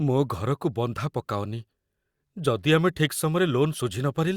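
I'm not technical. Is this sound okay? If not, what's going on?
Yes, nothing is going wrong in this recording.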